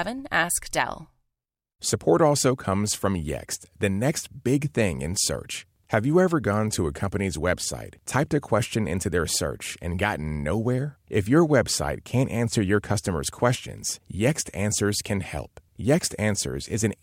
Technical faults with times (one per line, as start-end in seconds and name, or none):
none